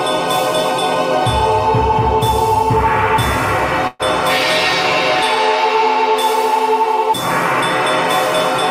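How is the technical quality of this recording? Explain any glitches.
The music has one glitch, a call audio freeze from 3.87 to 4.02 s. The last sound is held over as a fading buzz, then the music resumes exactly where it stopped. Packets likely stalled and the jitter buffer ran dry, so about 120 ms was filled in, nothing was lost, and everything afterwards plays 120 ms late.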